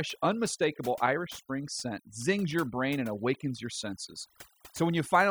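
Overdone noise removal runs throughout the speech. Frequency bands near the estimated noise are cut hard. The background drops to twinkling near-silence.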